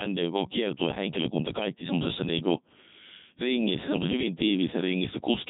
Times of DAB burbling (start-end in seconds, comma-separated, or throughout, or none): none